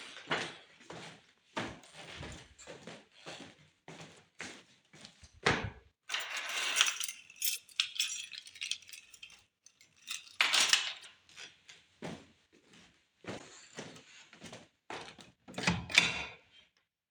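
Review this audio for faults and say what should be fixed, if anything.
Damaged data in a compressed stream causes three short blips, at 7.54 to 7.58 s, 11.01 to 11.06 s and 13.36 to 13.41 s. Each lasts about 44 ms. Corrupted bytes make the decoder misread frames and lose sync until the next valid header. To prevent this, verify the file with checksums and re-fetch or re-encode it from an intact source.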